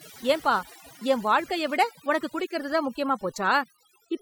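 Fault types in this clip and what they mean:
overdone noise removal: a noise reducer set too hard has cut away every frequency band sitting near its noise estimate, quieter parts of the speech included, across the whole clip, leaving near-silent gaps flecked with twinkling specks. Unlike band-limiting, it isn't a fixed dullness but a warbling, shifting background.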